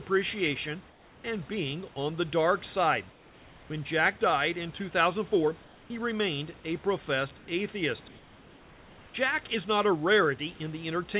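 At 0.9–1.24 s, 3.12–3.7 s (after "on the dark side"), 5.64–5.9 s (before "remained a professed atheist") and 7.38–7.48 s (after "remained a professed"), the room background gives way to flat, featureless hiss, likely comfort noise in place of the background from a sender that stops transmitting during pauses. It's about 3 dB quieter in the first three gaps and level in the last.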